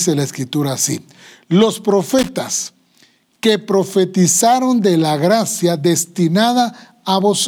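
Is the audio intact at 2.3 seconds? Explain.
No. Loose connector crackle runs from 2.19 to 2.29 s, ending right at that moment: a worn contact briefly makes and breaks, chopping the speech into an irregular scratchy burst. Unlike evenly spaced digital clicks or a clean dropout, its roughness is random.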